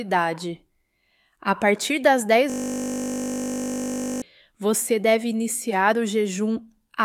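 From 2.50 to 4.22 s a system hang loop replays one 20 ms slice, giving a steady 50 Hz buzz rather than the silence of a dropout.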